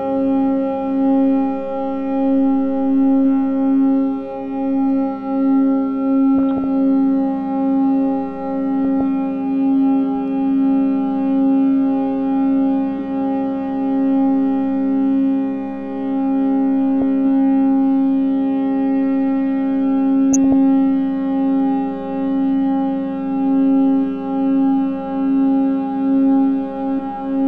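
Throughout the clip, too few bits are shared across the 32 sub-bands, so the upper bands drop out and those that remain are coarsely quantised. The sound is dull and muffled, with a gurgling, granular grain that shifts as bands flicker on and off. This is plainly audible damage, likely MP2 compression, and the dullness fits a low rate around 80 kbps.

At 6.38 to 6.64 s, 8.85 to 9.01 s, 17.02 s and 20.33 to 20.53 s, bit errors slip past error correction into the coded audio. The error rate points to a fraction of a percent. Corrupted samples put short blips of noise in single sub-bands, and corrupted scale factors make sub-bands jump in level for up to a frame. Each burst is DAB burbling, with the instant at 17.02 s a brief blip.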